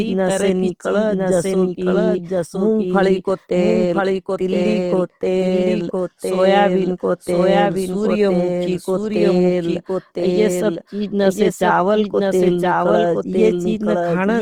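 From start to finish, a doubled audio track runs under the speech. The likely cause is a second capture of the same signal through a slower path, or an edit that left two copies out of step. A full-band copy trails the original by about a second at roughly the same level. Every phrase is answered by a clean, equally loud repeat with no decay or room colour, so the speech overlaps itself.

Opus compression also affects the whole clip, likely from encoding in Opus's CELT music mode at a rate that points to roughly 24 kbps. The encoder keeps each band's energy but runs short of bits, so it fills bands by folding lower ones or with noise. Bandwidth stays full, with content reaching 20.2 kHz. The damage is plainly audible: tonal parts of the speech turn rough, grainy and noisy rather than swirly.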